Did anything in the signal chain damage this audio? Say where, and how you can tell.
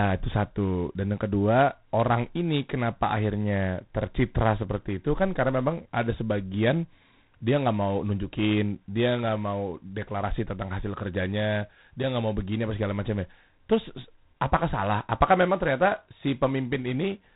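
Yes, at the codec stage: G.726 ADPCM damage runs through the whole speech clip. Nothing passes above 3.9 kHz, and a harsh, rasping hiss rises and falls with the speech level. Coding only a few bits of prediction difference per sample fits the 24 kbit/s mode.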